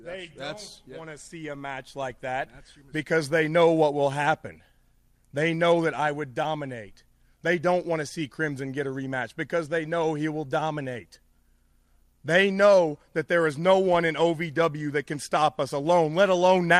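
Nothing stood out on listening to this recording.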